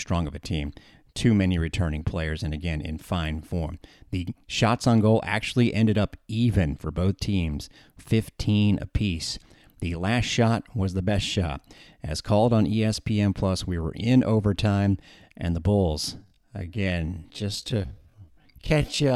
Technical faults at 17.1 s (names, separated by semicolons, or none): time-stretched section